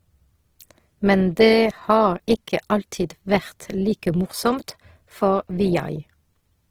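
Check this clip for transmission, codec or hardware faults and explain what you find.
One codec fault runs through the whole clip: Opus compression. The likely cause is an encoder in its music (CELT) mode starved for bits, at a rate that fits about 16 kbps. Because CELT preserves each band's energy and patches starved bands with folded or noise-filled content, the speech turns grainy, rough and hissy rather than hollow. The damage is plainly audible, yet the bandwidth stays full, with nothing above 20.4 kHz.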